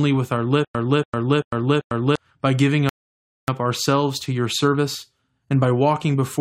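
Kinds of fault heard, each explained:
Stutter with silent gaps: after "with our", a 288 ms fragment plays four times, each followed by 100 ms of silence, likely from a stream stall replaying its buffer.
Rebuffering stall: after "by giving", playback halts for 0.59 s of silence, then resumes exactly at "ourselves to your service", adding time without losing audio.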